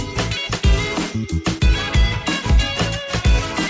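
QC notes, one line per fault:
Nothing stood out on listening, with the audio coming through the G.722 call path and nothing above 8 kHz, as that codec would carry it.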